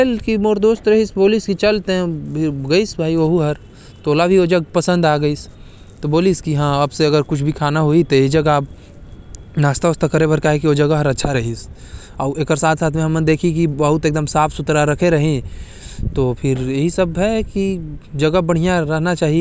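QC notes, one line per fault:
No faults heard in this speech recording.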